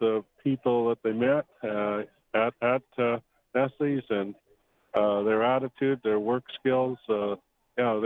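No technical fault can be heard anywhere in the audio. There is nothing to place in time, and no moment where the sound breaks, jumps or changes character.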